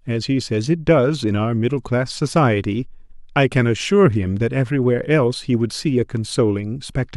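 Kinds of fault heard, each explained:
No technical faults are audible.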